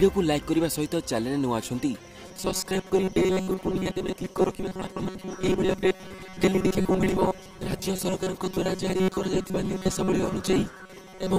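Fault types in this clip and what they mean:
Robotic sound from repeated short buffers: from 2.28 s to the end, the sound turns into a rigid, metallic buzz at 188 Hz, with most of the signal replaced by repeats. This is likely caused by new audio arriving too seldom, with each gap filled by looping a chunk of about 5.3 ms. On a spectrogram this shows as flat, evenly spaced harmonic lines at multiples of 188 Hz. The waveform shows identical cycles repeating every 5.3 ms.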